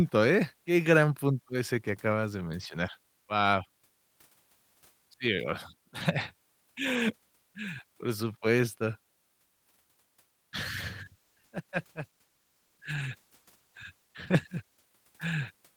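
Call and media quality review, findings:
Call bitrate drop, 10.63–14.95 s: speech turns rough and muffled, highs gone. The encoder was starved, which fits a fall from 32 to 17 kbps after a lower bandwidth estimate.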